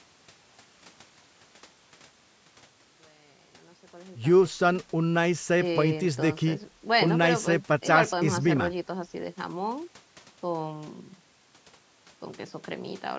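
Nothing stood out on listening to this speech recording, whose gentle fade-in over the opening seconds up to about 5.3 s is a deliberate editing touch.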